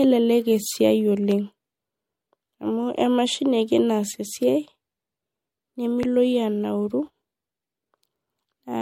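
Across the whole clip there is generation loss, most likely from the speech being run through MP3 at 64 kbit/s about three times over. Each pass requantises the spectrum on a shifted frame grid, so the errors pile up rather than staying at one pass's level. The result is a swirly, hollow texture with smeared consonant attacks, worse than a single 64 kbit/s encode would give, and nothing remains above 16.6 kHz.

From 1.31 to 1.34 s a loud pop breaks in, a sudden electrical step or pulse, likely from a plug, switch, static discharge or driver glitch, added on top of the signal. It lands as one sharp click-like pop peaking about 5 dB above the speech, which carries on underneath. A second, stronger pop of the same kind comes from 6.03 to 6.06 s, a single hit about 10 dB above the speech, heard as a harder snap.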